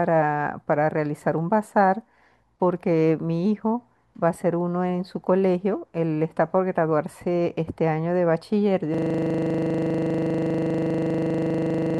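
At 8.94 s the speech gives way to a system hang loop that runs to the end of the clip at 12.0 s. The machine or its audio driver stopped supplying new samples while the sound hardware kept replaying one 40 ms slice of its ring buffer, about 76 times in total. At a 25 Hz repeat rate this is heard as a hard, mechanical stutter-buzz. A waveform shows one identical block tiled end to end, and a spectrogram shows frozen content with vertical seams every 40 ms.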